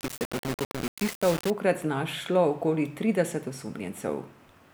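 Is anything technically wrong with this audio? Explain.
Yes. From 0.0 to 1.5 s the speech was likely reduced to low bit depth without dither, rounded to very few levels, about what a 4-bit signal allows. The error tracks the speech, giving grainy distortion only about 10 dB below it that changes with each sound.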